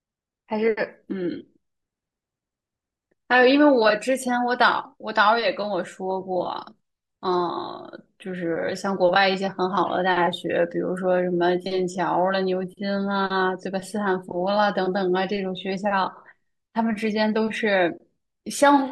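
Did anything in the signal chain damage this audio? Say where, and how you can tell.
No, nothing in the chain did.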